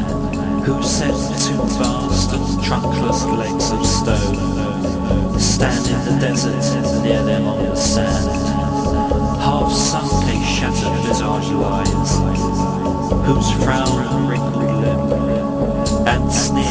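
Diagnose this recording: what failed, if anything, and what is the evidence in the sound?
Nothing failed here that I can hear; no stage in the chain has left any trace of trouble in the sound.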